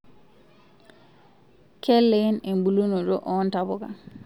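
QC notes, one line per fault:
No faults found in this speech clip.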